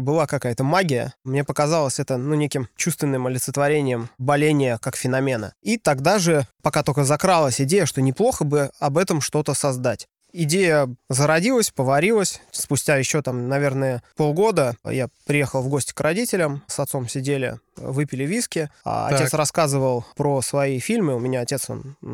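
No technical faults occur at any point in this speech recording.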